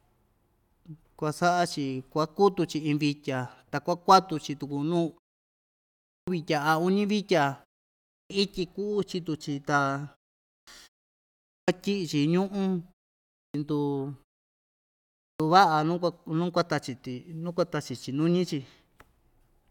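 The output device drops into sleep during pauses and needs time to wake, so speech resuming at 6.09, 8.11, 10.49, 11.5, 13.37 and 15.21 s loses roughly 0.17 to 0.19 s: a clipped start after a pause, words bursting abruptly from silence without their opening sounds.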